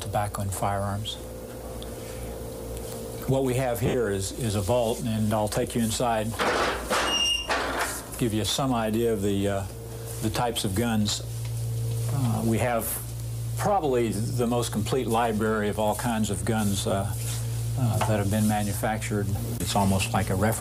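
Lost LE Audio frames break the Bluetooth stream twice. From 3.86 to 3.94 s, about 70 ms of audio goes missing in gaps scattered over 80 ms, with the longest unbroken run around 50 ms, which points to seven 10 ms frames. The LC3 decoder refills each gap by repeating the last good spectrum with scrambled phase, so the sound smears into a brief noisy blur. At 5.63 s, a single 10 ms frame drops, leaving a shorter smear.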